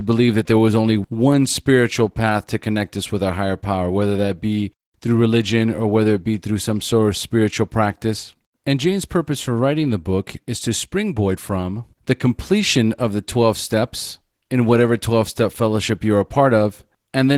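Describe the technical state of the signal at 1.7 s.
At 1.7 s the speech carries Opus voice compression, present throughout the clip. Damage is plainly audible. It fits a low rate near 16 kbps in hybrid mode: linear prediction below 8 kHz, a thin transform layer above. The voice sounds hoarse and slightly robotic.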